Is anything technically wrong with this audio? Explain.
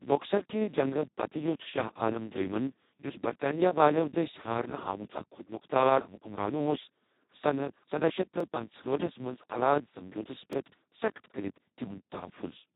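Yes, two problems stand out.

The whole clip has been through the Speex codec at a very low setting, around 2 kbps by the sound of it. With so few bits for the excitation, the speech comes out hoarse, noisy and fairly robotic, and nothing survives above 3.8 kHz, so it sounds dull and boxed-in.

There are also two tiny blocks of digital silence, where samples were zeroed out, likely because the output buffer wasn't filled in time. One is at 8.40 s, between "سداہ شیٹھ" and "پنژہاٹھ ٹھس", lasting about 1.2 ms. The other is at 10.53 s, right after "الااد سمجوتس", lasting about 2.7 ms, which fits a 128-sample block. Each one cuts hard to zero and back with no fade, so you hear it as a sharp tick rather than a gap.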